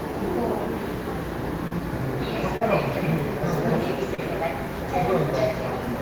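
A recording of sounds with short concealed packet loss at 1.67 s, 2.57 s and 4.15 s. Each time about 40 ms of audio arrived too late, and the receiver bridged the gap by extending the preceding sound before blending back, leaving a brief smear or wobble.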